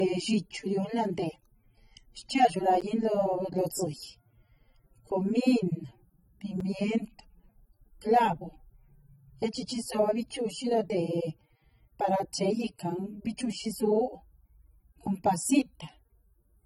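A low-bitrate encoding was likely saved again as a high-bitrate MP3, so the speech runs through the whole clip carrying the artefacts of that earlier pass, with nothing above 19 kHz, and the larger file brings none of it back.

At 2.81 s a block of digital silence about 10.7 ms long, 512 samples, drops in with hard edges, heard as a tick or dip.

At 6.60 s a shorter block of digital silence recurs, about 5.3 ms, 256 samples, and its abrupt edges give a tick or dip in the speech.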